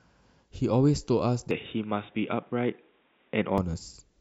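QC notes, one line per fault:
1.51–3.58 s, input switched to a poorer device: the speech abruptly turns dull and boxy, with nothing above 3.8 kHz, a faint new noise floor far below the signal and little level change, then clears. The input likely moved to a narrower-band microphone and back, without a gap.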